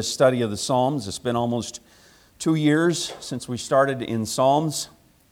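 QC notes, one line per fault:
Nothing here needs flagging; the audio comes across with no faults to log.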